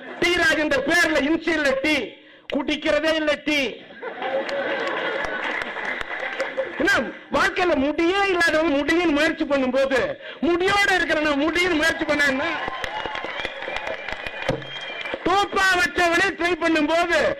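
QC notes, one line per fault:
8.64–8.70 s, damaged data in a compressed stream: there's a short glitch here, about 56 ms. That's the decoder hitting a stretch of corrupted bytes: it can't make sense of those frames, loses its footing, and skips ahead to the next frame header it recognises. The garbled decode gives the glitch.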